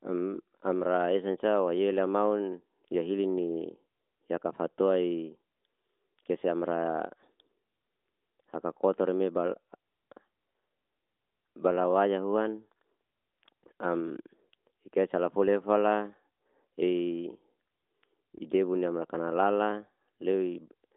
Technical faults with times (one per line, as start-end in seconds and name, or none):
none